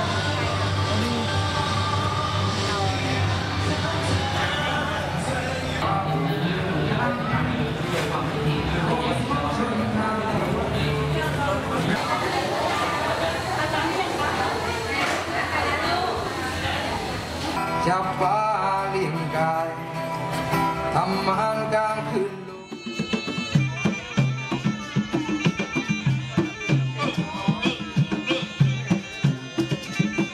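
From 23.58 s to the end, the audio falls into a section at the wrong speed. Playback runs at 0.893 times the original rate, so everything slows by roughly a tenth and drops about two semitones in pitch, with tempo and pitch shifting together at the same instant. The sound turns deeper and more sluggish from that point on. The likely cause is that this portion was resampled or played against a mismatched clock during editing or playback.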